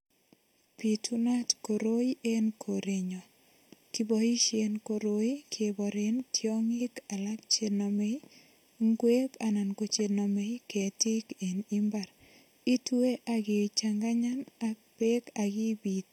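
Channel delay (comb filtering) runs throughout the whole speech clip. One channel arrives late by around 0.4 ms, and when the two were folded to mono, everything they share cancels at a first notch of around 1.5 kHz and again at evenly spaced frequencies above it. Because the delay never changes, those notches stay fixed, giving the speech a hollow, phasey colouring that stays constant from start to finish.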